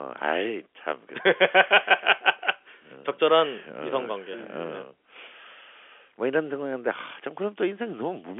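No technical faults are audible.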